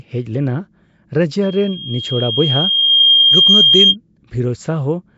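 Throughout, the speech sounds rough and hissy, smeared and underwater, with nothing above 7.7 kHz. This is likely Nellymoser compression at about 32 kbps. From 1.42 to 3.96 s, a loudspeaker feedback squeal appears: a 3.2 kHz tone swells over about a second and a half, reaching roughly 10 dB above the speech.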